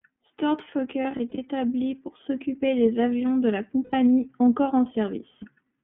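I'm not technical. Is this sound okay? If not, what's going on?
No. Two things are going on.

First, the whole recording has passed through the iLBC codec, a phone-style compression used for internet calls. It squeezes the speech into small 30 ms chunks and throws away everything above about 3.4 kHz. That is why the voice sounds thin, muffled and boxy, like a phone line. The damage is plainly audible. The speech has a slightly rough, synthetic edge.

Second, there are lost iLBC frames, meaning bits of the audio never arrived. When that happens, the decoder fills the hole by repeating the last small piece of voice with some noise mixed in. The first patch runs from 1.02 to 1.39 s. Several short dropouts, together about 150 ms, are scattered across those 360 ms. Each one is very brief, so you hear short buzzy blips. The second runs from 3.84 to 3.94 s. It is a single 90 ms gap that sounds like a held, breathy vowel. 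After each gap the voice snaps back almost at once.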